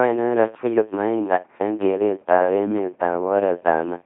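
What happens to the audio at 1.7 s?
LPC-10 vocoder coding at 1.7 s, as throughout: each frame is excited by buzz or noise through a short filter, giving robotic, buzzy speech with nothing above 3.7 kHz.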